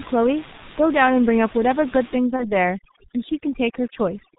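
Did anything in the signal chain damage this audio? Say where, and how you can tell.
Yes, at the codec stage, throughout. The whole clip passes through a G.723.1 codec, and the damage is heavy. Nothing comes through above 4 kHz, so the speech sounds muffled, and the slowly updated vocal model leaves it hoarse with smeared consonants. The thin, coarse texture points to the codec's 6.3 kbit/s rate, where each 30 ms frame carries very little detail.

In call processing, from 2.18 s to the end of the clip, overdone noise removal cuts in. Up to that point the room noise sits about 16 dB under the speech. After it, the background collapses to near silence with twinkling specks, because the suppressor shuts off individual frequency bands close to its noise estimate. Quieter parts of the speech fall into those bands and vanish too.

On the network path, between 2.36 and 2.53 s, there is VoIP packet loss concealed by the speech codec. 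The gap fits one lost 30 ms frame. The decoder fills it by extending its last pitch and filter at falling gain, which gives a brief, fading smear. Each frame builds on the previous one, so the speech stays weakened or distorted for tens of milliseconds after the packets resume.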